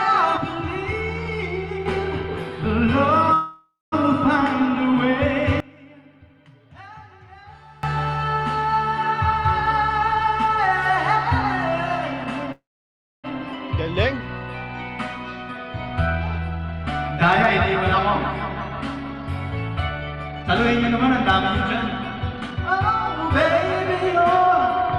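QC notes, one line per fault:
0.37–1.86 s and 5.60–7.83 s, sudden gain jump: The level drops abruptly by about 6 dB in the first span and about 24 dB in the second, then snaps back. The background noise moves with the sound, which points to an unramped digital gain change. On the waveform the envelope steps down and up in a single sample. On the spectrogram, sharp vertical boundaries appear across all frequencies at each edge.
3.33–3.94 s and 12.52–13.26 s, call audio freeze: The sound stalls and its last moment is stretched into a fading buzz. The stalls last 0.59 s and 0.72 s, ending in about 0.2 s and 0.63 s of silence. The likely cause is delayed packets draining the jitter buffer. Playback then resumes where it stopped, with nothing lost. On the spectrogram this shows as smeared horizontal streaks decaying into a blank gap.
9.32–10.92 s, 12.25–12.48 s, 15.86–17.13 s, 18.63–21.10 s and 21.92–24.80 s, jitter buffer speed-up: The receiver trims short pitch-period pieces to shrink a swollen buffer. 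The sound therefore runs faster at unchanged pitch: about 9%, 17%, 10%, 12% and 12%. Roughly 0.15, 0.05, 0.15, 0.3 and 0.4 s are removed. On the spectrogram, harmonic spacing stays constant while events compress in time. The waveform shows tiny splice seams.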